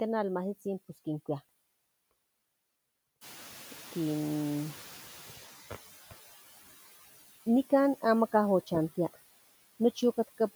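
Right from the start you can hear noise suppressor artifacts: the suppressor is pulling down the bands it treats as steady noise, by about 13 dB, and doing it frame by frame. So the background dips in the gaps and swells back under the speech.

Around 3 s the room noise jumps by about 16 dB, settling roughly 18 dB below the speech. That's the room itself, not a fault, but it sets off the noise suppressor catching up. From 3.21 to 5.99 s the suppressor is still working from its old, quieter noise estimate, so the louder background comes through with less reduction at first. Over those 2.78 s the estimate adapts and the noise sinks, ending up cut by about 11 dB.

Then there are two loud pops, one from 8.75 to 8.79 s and another from 10.03 to 10.07 s. Each is a single sharp click, roughly 10 dB above the speech, laid on top while the speech carries on underneath. They're likely voltage spikes from a plug, a switch, static discharge or a driver glitch, shaped by the circuitry after them.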